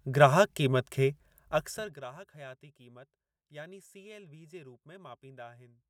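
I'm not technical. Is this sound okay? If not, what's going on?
No. From 1.4 to 2.04 s the speech gets much quieter, but in small jumps, about thirty a second, instead of a smooth fade. Each jump clicks, giving a ticking, zipping sound called zipper noise. A smooth level change would sound clean.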